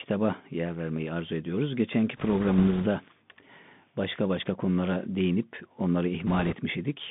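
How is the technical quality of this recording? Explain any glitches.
The recording is poor: narrowband headset quality throughout, with two bursts of crackling damage.

The whole clip carries the Bluetooth CVSD headset codec. The speech occupies only about 150 Hz to 3.6 kHz, which fits a 64 kbps CVSD stream. The coder sends a single up-or-down bit per sample and adapts its step size, so fast, loud high-frequency movement outruns it. The result is plainly audible: scratchy sibilants and a fine granular hiss under the speech. A spectrogram would show a hard ceiling just under 3.6 kHz with nothing above it, and a grainy noise floor filling the gaps between syllables.

Bit errors on a Bluetooth voice link appear from 2.17 to 2.87 s and again from 6.27 to 6.56 s, at an error rate of a few percent. In CVSD every bit carries the same small weight and each mistake fades quickly, so there are no sharp clicks. 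Instead these stretches take on a rushing, crackly texture laid over the speech. On a waveform they look fuzzed rather than spiked, and a spectrogram shows broadband speckle across the whole band during those two windows.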